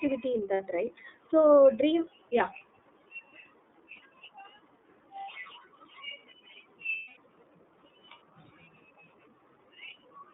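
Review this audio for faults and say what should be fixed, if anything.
iLBC codec, throughout: the speech is confined to a telephone band of roughly 150 Hz to 3.7 kHz, with nothing above it, and the coding damage is plainly audible as a rough, slightly synthetic edge. iLBC codes the excitation of each 30 ms frame on its own at a low bit rate, which fits its 13.33 kbps mode, and that discards fine spectral detail. Prevent it by carrying the audio over a wideband codec such as Opus instead.

Lost iLBC frames, at 0.54 to 0.60 s, 3.93 to 4.00 s and 6.96 to 7.18 s: packets went missing, and the decoder covered each gap by repeating the last pitch cycle mixed with noise, heard as a held, buzzy vowel. The first two gaps last about 60 ms, which points to two frames. The third runs 210 ms, about seven frames, long enough for the filler to audibly fade. Because each frame decodes independently, the speech comes back almost immediately after every gap. 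Prevent it by reducing packet loss on the network path and adding redundancy or forward error correction to the stream.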